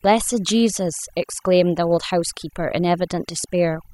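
Overdone noise removal runs throughout: an over-aggressive reducer drops bands near its noise estimate, leaving near-silent, twinkling gaps.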